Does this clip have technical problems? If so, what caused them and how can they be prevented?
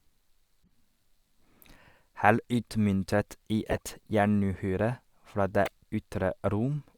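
Yes. Brief chirps and noise blips cut through the speech at 0.64–0.69 s, 2.54 s, 3.71–3.78 s and 5.65–5.69 s, loudest near 3.7 s and faintest at 0.6 s. This is a corrupt frame decoded: damaged bits in a handful of compressed frames were played anyway, misplacing energy in frequency for each frame's length. Checksums on the stream, with bad frames concealed or dropped rather than decoded, would prevent it.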